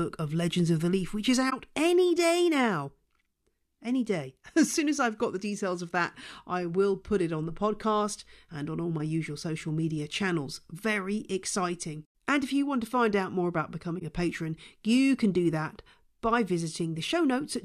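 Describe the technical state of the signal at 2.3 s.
At 2.3 s the speech signal is intact, with no dropout, clipping, distortion or other technical fault.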